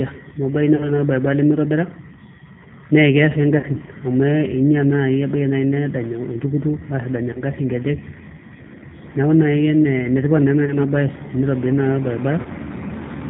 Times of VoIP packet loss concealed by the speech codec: 0.76-0.92, 3.59-3.66, 7.33-7.44, 10.65-10.78, 12.41-12.48

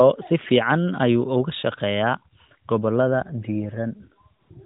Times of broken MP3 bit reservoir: none

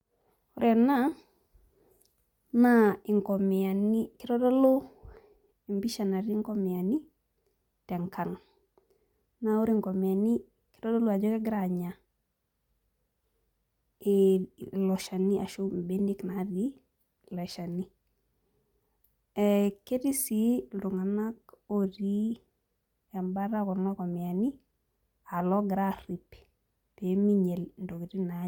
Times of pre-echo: none

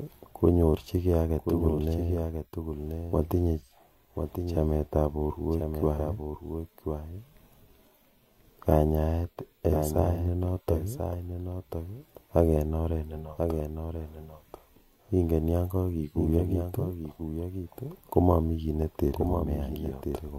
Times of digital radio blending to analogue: none

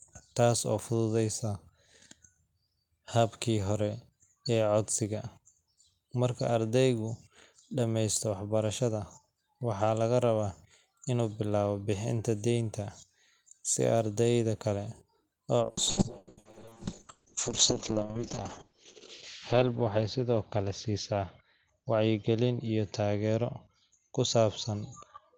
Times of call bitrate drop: 15.62-25.37

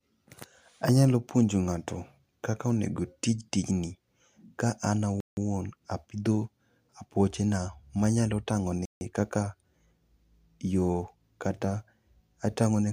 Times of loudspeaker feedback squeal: none

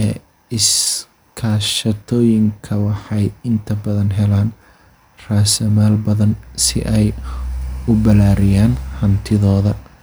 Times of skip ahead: none

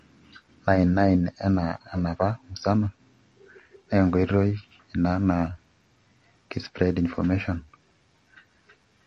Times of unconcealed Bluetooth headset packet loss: none

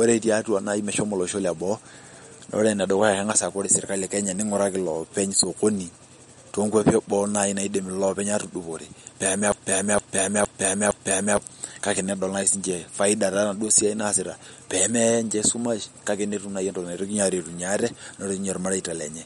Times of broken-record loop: 9.52-11.37

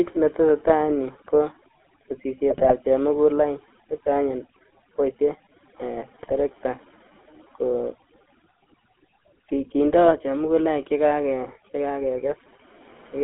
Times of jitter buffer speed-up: none

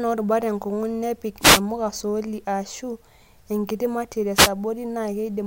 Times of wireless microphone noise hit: 1.40-1.61, 4.34-4.51

